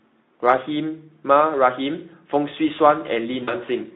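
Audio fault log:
3.43–3.54 s, VoIP packet loss concealed by the speech codec: About 40 ms of audio goes missing, which fits two lost 20 ms frames. The Speex decoder fills the gap by guessing. It repeats the last pitch and spectral shape and turns the level down each frame. So the speech smears into a brief buzzy tone or coloured noise that fades. Each frame builds on the one before, so the voice stays weak or distorted for tens of milliseconds or more after about 3.54 s.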